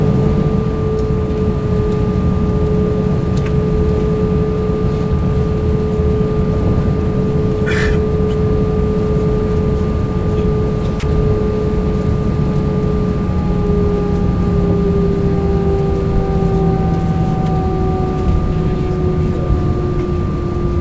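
At 11.00 to 11.03 s, a 30 ms slice of the sound gives way to a brief patch of steady, featureless noise before it returns. That's likely sound dropped by the voice detector, with comfort noise filling the gap, all heard through a G.722 call path with nothing above 8 kHz.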